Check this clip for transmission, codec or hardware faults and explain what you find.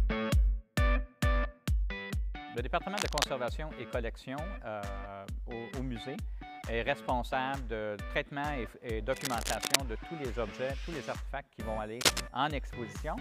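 Three bursts of cable scratch noise occur, at 2.96 to 3.24 s, 9.1 to 9.76 s, and 12.01 to 12.24 s. Each is a dense, uneven scratchy rustle roughly as loud as the sound, and the last is slightly louder. A worn connector or cable being moved is the likely cause, with its contact resistance fluttering. Unlike isolated clicks, the noise clusters densely for a few hundred milliseconds.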